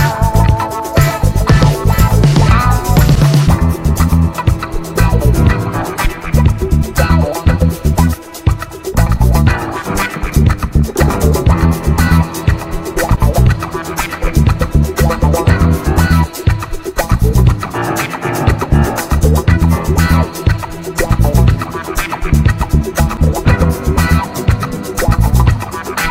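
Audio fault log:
No faults detected in this clip.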